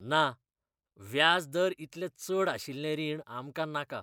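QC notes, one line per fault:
Nothing stood out on listening to this speech recording.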